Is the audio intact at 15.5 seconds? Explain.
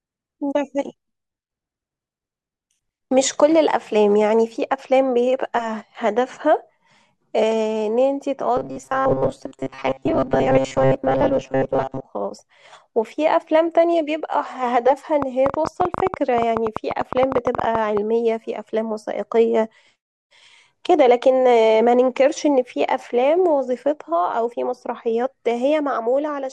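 No. A train of clicks runs from 15.22 to 17.98 s: around 30 same-shaped pulses at about 11.3 per second, unevenly spaced and about 15 dB above the speech, likely from interference or a faulty connection. Unlike a single click, they tick over the sound, pauses included.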